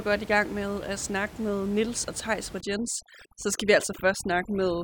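From 2.61 s to the end, overdone noise removal kicks in, gating bands near the room-noise estimate, so the background twinkles and quiet parts of the speech are cut along with it.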